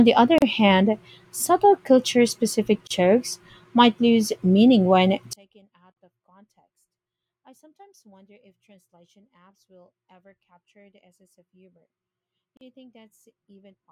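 At 0.38 s the speech cuts out for about 37 ms, then again at 2.87 s for about 33 ms. These are gaps at a join of encoded pieces. Separately encoded chunks were stuck together with each encoder's start-up delay and final-frame padding left in. Each one leaves a short silent hole with smeared edges, and then the speech carries on from where it stopped.

From 5.33 s to the end, the speech drops by about 35 dB when summed to mono, leaving only a faint trace. That's likely one channel inverted, so the centred content shared by both channels cancels out.

Within that stretch there are two more join gaps: about 45 ms at 5.92 s and about 39 ms at 12.57 s. Each is the same kind of little silence.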